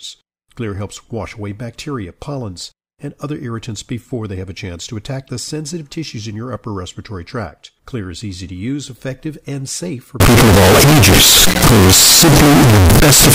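Float read as integer, from 10.2 s to the end, after "effective and safe for": the speech becomes a loud, harsh, near-square wave at an almost fixed, high level. Float samples were likely decoded as integers, so sign and exponent bits set the level.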